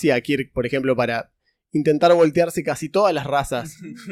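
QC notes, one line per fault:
Nothing stood out on listening.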